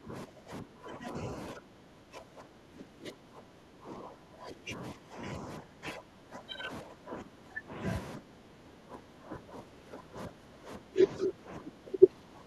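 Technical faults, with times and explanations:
0.00–1.27 s, 1.53–5.23 s, 5.39–7.81 s, 8.17–10.99 s and 11.17–12.47 s, speech suppressed in double talk: the speech repeatedly dips by about 15 dB, closer to 20 dB in the 1.53–5.23 s stretch. This is likely an echo canceller unable to separate the near-end talker from overlapping far-end echo and attenuating everything.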